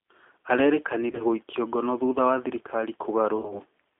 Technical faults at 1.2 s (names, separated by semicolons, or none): G.729 codec; VoIP packet loss concealed by the speech codec